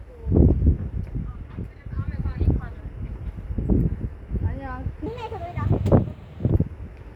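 From 5.06 to 6.50 s, a section at the wrong speed runs about 1.4 times too fast, raising the pitch roughly five semitones. Tempo and pitch jump together, unlike a pitch shift, which keeps the timing intact. The cause is likely a clock mismatch during playback or editing.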